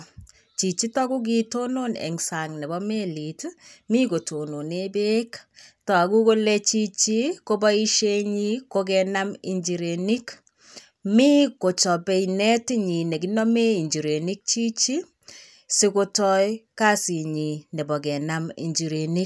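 No technical faults are audible.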